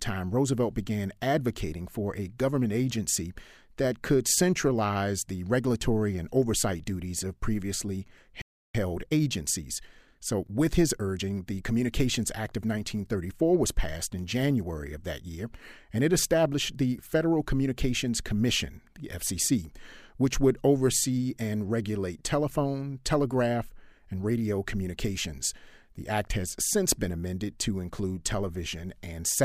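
At 8.42 s the speech cuts out and stays silent until 8.75 s, a gap of about 0.33 s. This is a playback stall, likely the player running out of data or its thread being blocked. After the gap, the audio resumes.

From 8.75 s to 11.75 s comes time-compressed catch-up: the player trims its backlog by splicing out and cross-fading short slices, so the speech runs 1.1 times fast at unchanged pitch. This is not a speed-up with a pitch rise.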